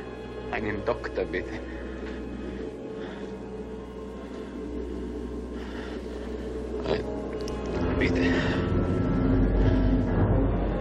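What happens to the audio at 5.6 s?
Nothing goes wrong at 5.6 s; the audio carries straight through that moment with no dropout, click, glitch or other fault.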